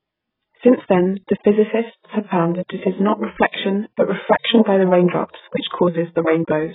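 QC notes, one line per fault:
Throughout, AAC compression: the speech was likely squeezed through AAC-LC at a very low rate, with damage consistent with roughly 8 kbps, so the encoder dropped everything above 3.8 kHz and coarsely quantised what remained. That leaves the speech dull and band-limited, with sibilants thinned out, and the sparse, heavily rounded spectral detail produces a warbling, smeared texture across sustained sounds for the whole clip.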